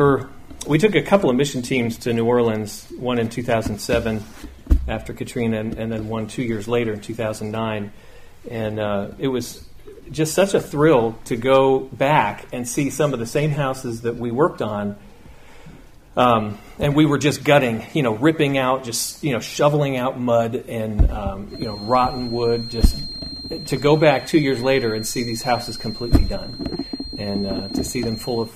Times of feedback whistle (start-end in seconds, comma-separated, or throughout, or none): 21.46-28.55